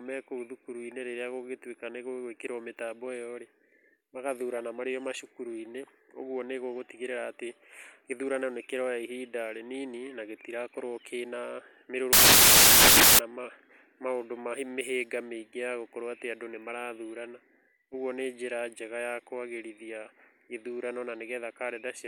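Samples built from the wrong bytes hit this speech clip from 12.13 to 13.19 s: misassembled sample bytes promote the low bits, so the speech becomes loud, harsh broadband noise.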